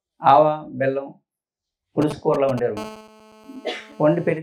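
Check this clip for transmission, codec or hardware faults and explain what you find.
Two hardware interference faults from a nearby 2G mobile phone appear in the later part of the clip, from about 2.0 s onward.

From 2.02 to 2.60 s, a galloping dit-dit-dit of short 217 Hz buzzes, fairly loud at about 10 dB below the sound, is GSM signalling bursts. The phone's brief radio bursts are rectified by the audio circuitry.

From 2.77 to 4.38 s, a steady, hard, raspy 217 Hz buzz rich in harmonics, about 21 dB below the sound, is GSM phone buzz. An active call's continuous 217-per-second transmit pulses are rectified into the audio.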